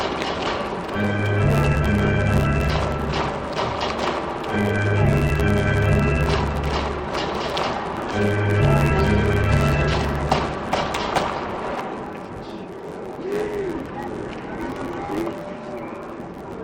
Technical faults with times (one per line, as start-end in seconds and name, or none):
0.00-16.63 interleaved audio read as planar